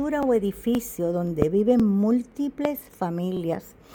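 Audio arriving in half-second chunks whose starts overlap the end of the previous chunk produces overlapping chunks: about 23 ms of sound replays at each join, heard as a regular stutter or click at 0.23–0.25, 0.75–0.77, 1.27–1.30, 1.80–1.82, 2.32–2.34, 2.84–2.87 and 3.37–3.39 s. Separately, a sudden voltage step, likely from a switch, static discharge or driver glitch, injects a loud pop at 1.42–1.44 s (about 20 dB above the signal) and another at 2.65–2.67 s (about 15 dB), each a single sharp thump riding over the audio, which continues underneath.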